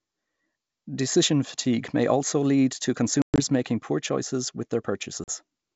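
Speech on a wideband ADPCM call suffers packet loss twice. Packets dropped after "may also lead to" (3.22–3.41 s, 140 ms gone, longest gap 120 ms) and after "making poor choices with" (5.24–5.30 s, 40 ms), leaving hard-edged silences. The decoder's predictor is then out of step, bringing brief slight distortion.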